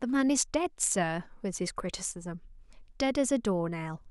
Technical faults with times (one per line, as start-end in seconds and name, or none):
none